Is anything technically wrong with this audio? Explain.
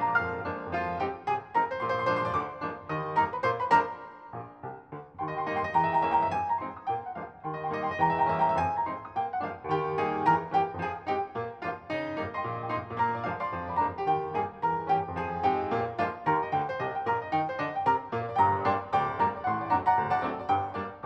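No, there is no technical fault to be heard in this audio. Nothing in it points to trouble anywhere along the recording or playback chain.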